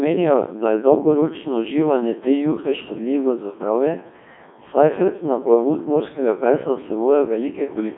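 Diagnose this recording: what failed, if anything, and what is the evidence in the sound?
Codec stage: a Codec 2 vocoder throughout, with heavy damage. The speech is rebuilt from pitch and envelope as robotic buzz, consistent with about 1.2 kbit/s, with nothing above 3.8 kHz. Plain band-limiting would sound dull but still natural.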